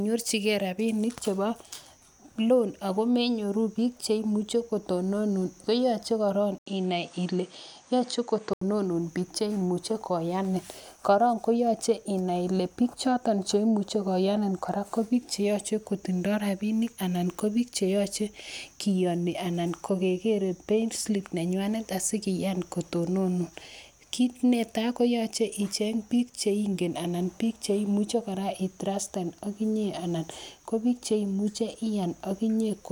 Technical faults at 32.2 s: none

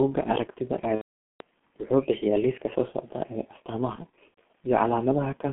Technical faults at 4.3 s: G.723.1 codec; VoIP packet loss concealed by the speech codec

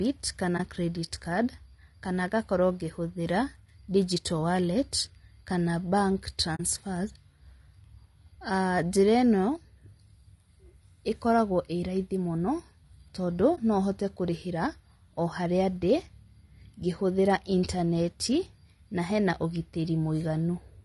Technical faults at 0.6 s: low-delay AAC compression; AAC frame loss with muting

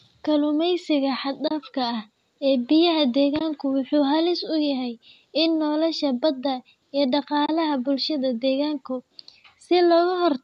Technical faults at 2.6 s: none

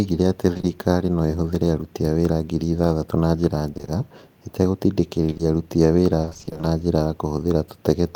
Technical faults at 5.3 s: short concealed packet loss

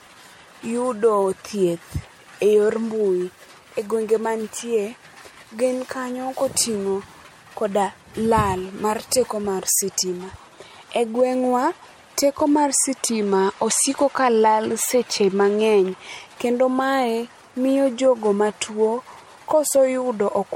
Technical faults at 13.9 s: generation loss

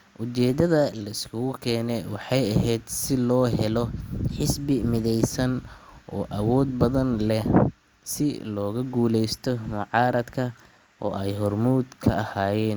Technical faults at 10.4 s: drift correction step

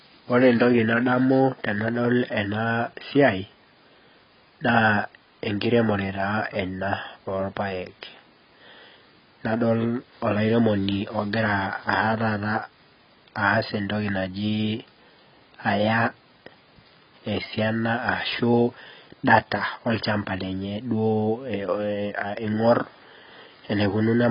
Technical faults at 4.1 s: AAC compression

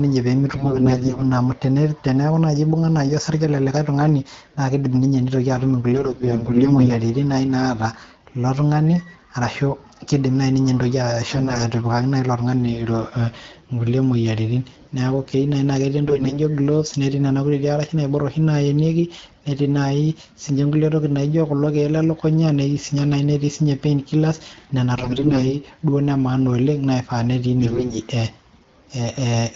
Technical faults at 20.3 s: none

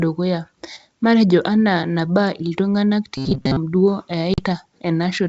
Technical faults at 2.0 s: none

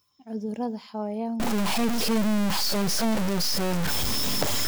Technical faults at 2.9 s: stuck bit

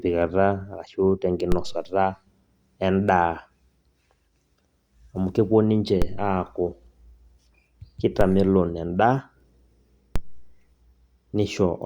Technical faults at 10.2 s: DC step

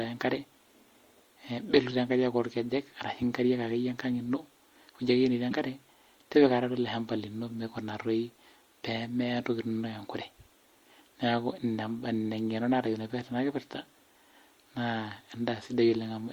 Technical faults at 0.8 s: MP3 compression

